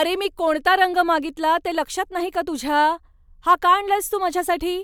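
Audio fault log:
No audible faults on this speech recording.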